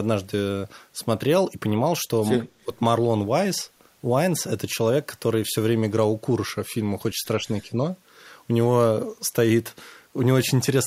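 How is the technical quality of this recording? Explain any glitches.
The recording has two brief dips where speech is suppressed during double talk. From 2.54 to 2.69 s the speech sinks by roughly 30 dB, nearly vanishing. From 7.37 to 7.81 s it dips only about 5 dB. Both sides were likely talking at once, and an echo canceller, unable to separate this talker from loudspeaker echo, turned everything down.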